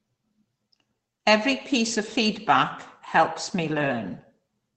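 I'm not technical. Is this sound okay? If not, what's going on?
Yes, on listening nothing in this speech stood out as a problem.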